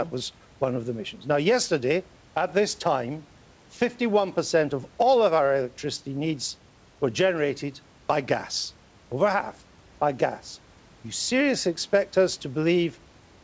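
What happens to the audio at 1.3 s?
Nothing goes wrong at 1.3 s: the speech comes through intact, with only the faint room noise about 34 dB below it and the call codec's usual band limit, with nothing above 8 kHz.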